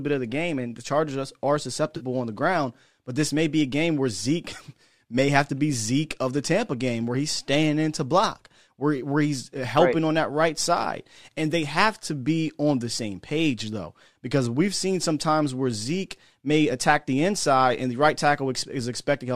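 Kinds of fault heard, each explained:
AAC frame loss with concealment: Around 1.97 to 2.04 s, roughly 40 ms of the speech goes missing, which fits four lost frames, and the decoder papers over the hole by reusing the last good spectrum with its phases scrambled or its energy smoothed. At this length it never fades to silence. It comes across as a brief smeared, noisy or phasey blip riding on the light coloration of what is likely a low-delay AAC stream.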